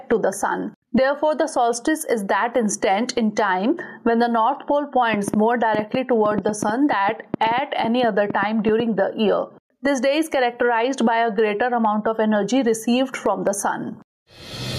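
Gain pumping runs right through: the gain ducks about 15 dB under loud moments, likely from excessive gain hitting a fast limiter. From 5.14 to 8.81 s there's a train of clicks, around six per second and unevenly spaced, popping well above the sound, likely interference or a faulty connection.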